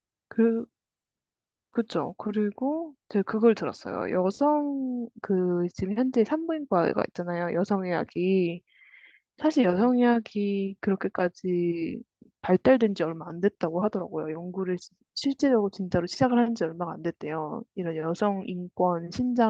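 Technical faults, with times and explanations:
Nothing stood out on listening to this speech recording.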